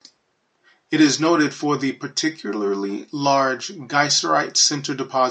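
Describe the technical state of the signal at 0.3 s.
The audio is intact at 0.3 s, with only faint room noise sitting about 53 dB below the speech.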